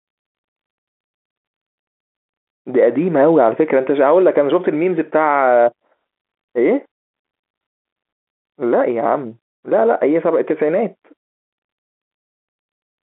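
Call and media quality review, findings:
Nothing to flag on this speech call, which just sits in its ordinary G.711 telephone band, with the top end stopping a little under 4 kHz as that path normally does.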